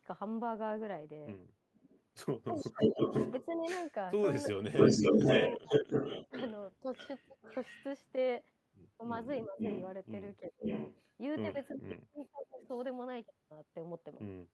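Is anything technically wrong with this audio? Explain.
Yes. Echo leak from 1.74 to 8.12 s and 9.59 to 12.80 s: a copy of the speech returns 495 ms late, louder than the talker at first, then quieter. The likely cause is a loudspeaker echo the far end's canceller didn't remove.

Speech suppressed in double talk at 2.49 to 7.36 s, 9.26 to 10.64 s and 11.71 to 12.69 s: during overlapping talk the speech drops out in pieces, by up to about 40 dB. This is likely the canceller turning down both sides when it couldn't separate them.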